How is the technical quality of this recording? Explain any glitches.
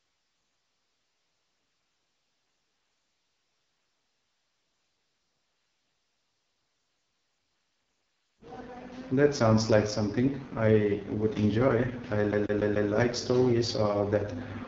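The recording is poor technically: rough, band-limited speech throughout and one skipping glitch near the end.

Throughout, the speech sounds raspy and grainy, with no content above about 7.6 kHz. This is the AMR wideband (HD Voice) codec working at its lowest rate. The encoder models the voice as pulses driving a vocal-tract filter and fills the top band with shaped noise. Heavy damage like this fits the 6.6 kbit/s mode.

From 12.32 to 12.90 s, just after "I would enjoy I", the audio stutters quickly and evenly. A slice about 145 ms long plays four times, with a brief mute at each jump. This is a CD stuck on one turn: a scratch throws the laser back one track at the same spot on each rotation, so the same fragment repeats in a rapid, mechanical loop before playback moves on.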